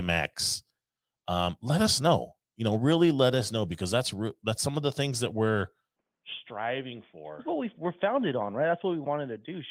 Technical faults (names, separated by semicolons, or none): input switched to a poorer device